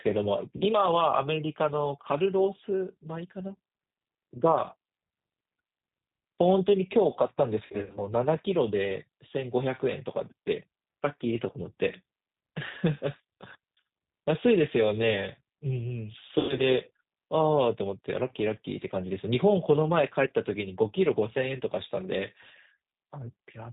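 Throughout, the speech passes through the G.729 codec at 8 kbit/s, rebuilt from a filter, pitch predictor and sparse pulses, so it sounds plainly rough, synthetic and cut off above 4 kHz. VoIP packet loss concealed by the speech codec hits at 0.57–0.64 s (about 40 ms missing), 7.66–7.99 s (160 ms scattered over 280 ms) and 16.39–16.63 s (140 ms, longest gap 100 ms). In each case the decoder stretches its last frame into a fading buzzy tone or coloured noise, and the voice stays weak or distorted briefly after the gap.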